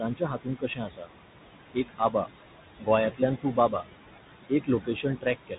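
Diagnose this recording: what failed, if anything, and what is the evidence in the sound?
Call processing: noise suppressor artifacts throughout, the room noise about 12 dB below the speech pumping down by about 17 dB between phrases; a spectrogram shows the noise floor gating frame by frame.

Codec: the Bluetooth CVSD headset codec leaves a hard spectrogram ceiling near 3.8 kHz, with scratchy sibilants and granular hiss, which fits CVSD's one-bit 64 kbps delta modulation.

Call processing: speech cut by the noise suppressor at 0.01–1.09, 1.74–2.27, 2.79–2.88, 3.42–3.73 and 5.47–5.58 s, with dips of about 14–16 dB. The waveform shows swallowed, faded word edges where the speech was treated as noise.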